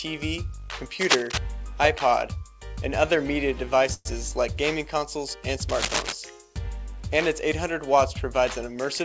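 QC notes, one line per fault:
1.01–1.38 s and 5.68–6.14 s, cable scratch noise: dense, uneven bursts of crackly noise, roughly as loud as the sound itself, likely from a worn cable or connector whose contact resistance jumps as it moves. A spectrogram shows ragged broadband speckle up to the 8 kHz ceiling, and the waveform shows spiky clusters.
3.94–4.07 s, call audio freeze: the last bit of sound is stretched into a decaying tail, then about 30 ms of silence, likely because delayed packets emptied the jitter buffer. Nothing is lost, and playback resumes 112 ms late. The spectrogram shows a smeared, fading band, then a blank strip.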